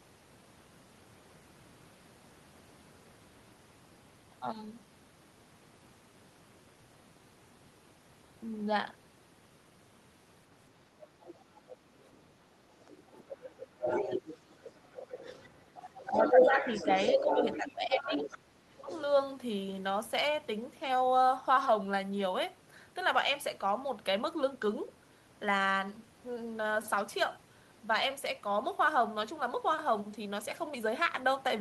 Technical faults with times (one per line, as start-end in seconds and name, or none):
11.21-12.08 other side's voice leaking through
12.88-18.38 other side's voice leaking through
15.76-18.12 speech suppressed in double talk
18.65-18.88 speech suppressed in double talk
18.89-19.01 other side's voice leaking through